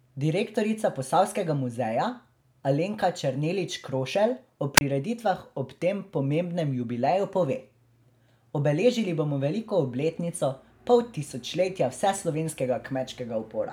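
At 4.76 s the speech briefly catches a rise of hiss and then falls into a hole of near silence lasting about 28 ms, with the sound back by 4.81 s. This is a wireless microphone squelch dropout. The radio link from an analogue FM transmitter weakened for a moment, and as the carrier faded the receiver's squelch circuit shut the output off rather than pass raw static, reopening once the signal recovered.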